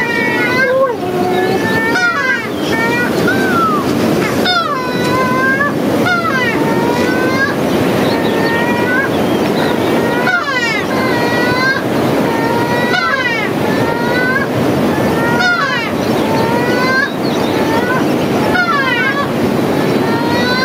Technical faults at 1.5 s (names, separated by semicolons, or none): gain pumping